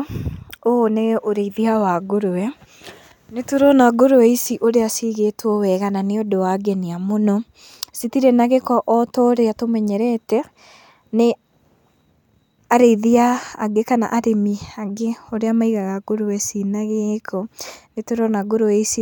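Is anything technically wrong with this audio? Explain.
No, nothing is technically wrong with this audio.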